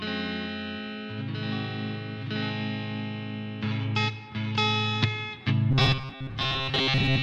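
From 5.71 s to the end, audio likely arrived too seldom, so short buffers were repeated. The result is robotic sound from repeated short buffers, a rigid metallic buzz near 133 Hz.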